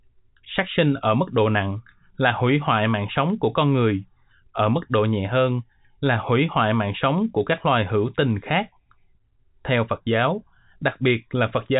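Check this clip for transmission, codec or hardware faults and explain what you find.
No transmission, codec or hardware faults can be heard in the clip. It carries the sound of G.711 telephone coding, with nothing above about 3.8 kHz and only a faint level-following hiss under the speech, which fits an ordinary 64 kbps mu-law telephone path.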